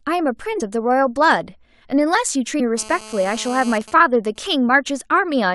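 At 0.59 s the speech jumps forward where compressed frames were skipped. Around three frames of 23.2 ms each, roughly 70 ms of audio, never reach the output. The decoder's overlapping frames smear the join into a short blip, not a sharp click. On a waveform the envelope changes abruptly. A spectrogram shows a discontinuity in the speech harmonics with a faint vertical smudge instead of a crisp line. The same fault happens again at 2.59 s, and this time about five frames, roughly 100 ms, are lost.

From 2.77 to 3.78 s a GSM phone buzz sits under the speech, about 17 dB below it. A 2G handset in a call is transmitting 217 bursts per second, and the audio circuitry rectifies them into a hard, raspy tone that has no relation to the speech. The spectrogram shows a steady ladder of horizontal lines at 217 Hz and its multiples, running well up the spectrum. The waveform carries a regular pulse train.

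From 3.81 to 4.66 s the buzz changes to GSM signalling bursts. These sound like even ticks with a longer 217 Hz buzz twice a second, roughly 25 dB down. The phone is still in the call but its user is silent, so it sends only short groups of bursts. On the spectrogram the harmonic ladder breaks into short vertical clusters, and the waveform shows separated packets of pulses.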